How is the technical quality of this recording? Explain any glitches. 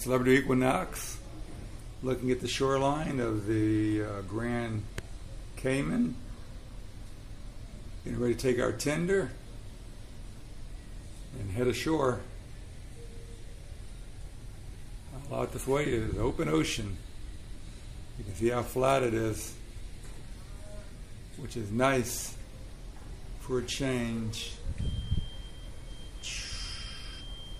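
Nothing here needs explaining, since I can't hear a single glitch anywhere in this recording.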